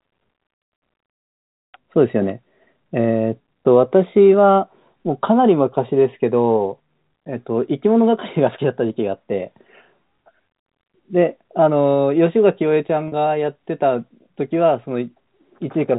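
At 13.08 to 13.12 s, a 40 ms gap shows packet loss with pitch repetition, which fits two lost 20 ms packets. The receiver loops the last pitch period to fill it, so the speech briefly holds on a slightly buzzy tone. Unlike a plain dropout, there is no silent hole or click. The narrowband G.711 telephone sound stays unchanged across the gap.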